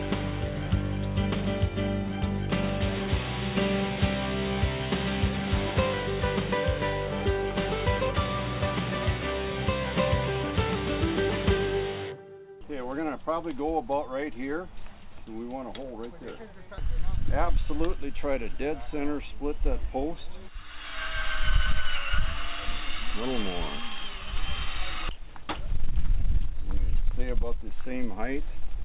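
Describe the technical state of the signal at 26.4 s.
At 26.4 s the audio is intact, with only the narrow band of a telephone-grade call codec, which leaves nothing above 4 kHz.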